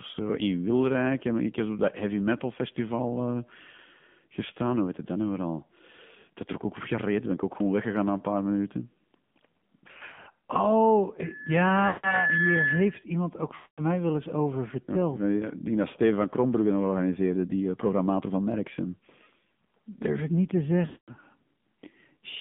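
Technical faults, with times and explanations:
Throughout: AMR narrowband mobile codec. Nothing passes below 150 Hz or above 3.5 kHz, and the voice has a plainly buzzy, synthetic texture from the vocal-tract model driven by sparse pulses, which fits the low 7.4 kbps mode.
9.88–10.51 s, 11.88–12.24 s, 13.56–13.82 s (after "iemand ook", before "wel eens over verteld"), 20.86–21.13 s (after "ik niet te"): lost AMR speech frames. The decoder repeats the last pitch and filter settings at falling gain, so speech smears, warbles or fades. The first gap is scattered short dropouts; the others each lose about 0.16–0.22 s of frames.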